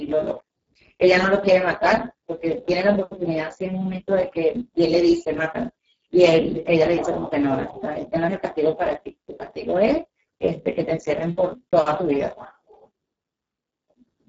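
Throughout, the speech shows heavy Speex codec damage. Starved excitation makes it noisy and hoarse, fitting roughly 6 kbps. Nothing is heard above 7.6 kHz.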